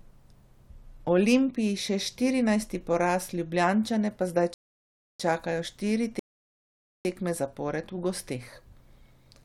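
Speech with two rebuffering stalls: the player runs dry and falls silent from 4.54 to 5.20 s, resuming on "čakajo štiri tekme zapored", then again from 6.19 to 7.05 s between "čakajo štiri" and "tekme zapored v". Playback continues exactly where it halted, adding about 0.66 s and 0.86 s.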